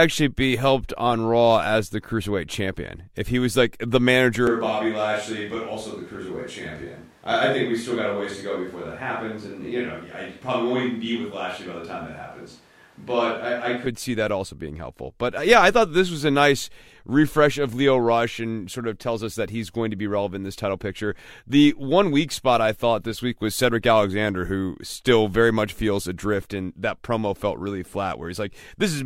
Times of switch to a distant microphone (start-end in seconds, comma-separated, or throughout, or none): 4.47-13.86